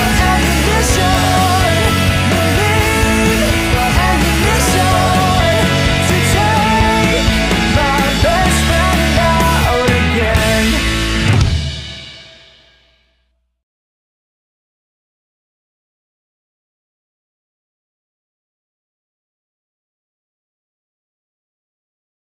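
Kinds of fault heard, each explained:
No technical faults can be heard anywhere in the recording, with the signal path working as expected throughout.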